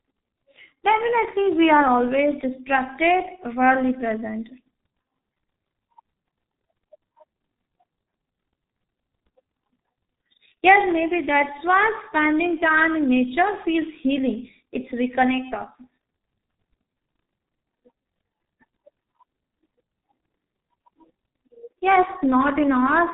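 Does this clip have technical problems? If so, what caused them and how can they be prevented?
Yes. G.723.1 codec damage runs through the whole recording. Nothing is heard above 3.8 kHz, so the speech sounds muffled and boxed in. The coder works on 30 ms frames and refreshes its model of the vocal tract only slowly, so quick transitions smear together. Consonants lose their edges and the voice takes on a hoarse roughness. The heavy degradation fits a rate near 6.3 kbit/s. To prevent it, capture or transmit with a wideband codec at a higher bitrate instead of a low-rate telephony codec.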